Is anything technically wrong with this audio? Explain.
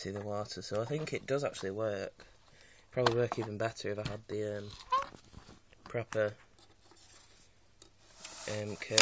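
No, no technical faults detected.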